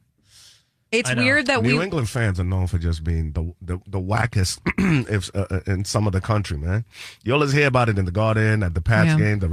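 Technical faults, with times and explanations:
No technical faults can be heard in this speech.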